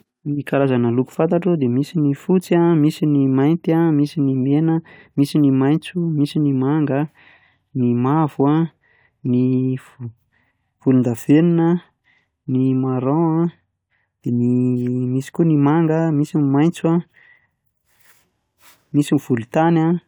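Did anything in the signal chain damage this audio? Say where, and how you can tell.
No, nothing along the chain seems to have damaged this speech recording; I can't hear any point where it goes wrong.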